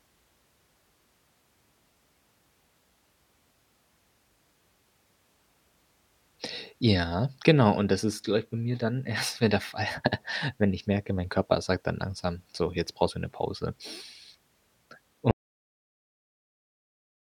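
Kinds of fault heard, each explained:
Audio dropout to silence: at 15.31 s the speech cuts to dead silence without room tone until the end, likely from input lost while recording continued.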